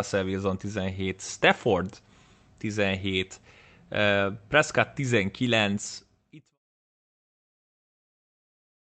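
Nothing stood out as a fault on listening to this speech.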